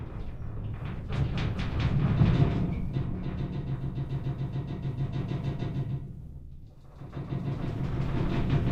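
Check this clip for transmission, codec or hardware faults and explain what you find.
No transmission, codec or hardware faults are audible anywhere in the audio.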